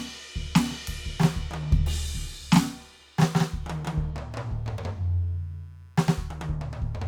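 From start to finish, a faint computer activity noise sits under the music: a buzzy, chirping texture pulsing at roughly 150 times per second, well down, around 40 dB below the music. Shifting load in the processor, graphics card or mouse disturbs the ground the audio circuit shares with the computer. Unlike steady mains hum, this buzz tracks the machine's activity, not the music.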